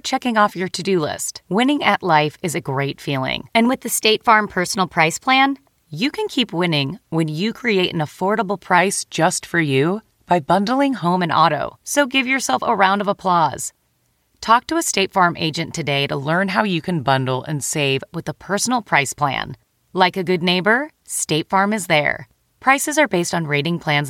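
Three drift correction steps, likely clock-matching software jumping the playback rate. From 3.67 to 5.82 s the sound runs 6.25% fast and a semitone sharp until "you can keep winning". From 8.78 to 11.04 s and from 16.23 to 18.01 s it runs 6.25% slow and a semitone flat, each time snapping back to normal.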